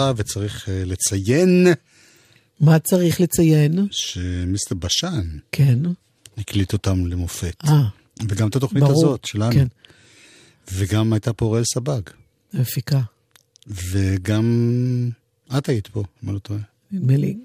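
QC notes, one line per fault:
No faults found.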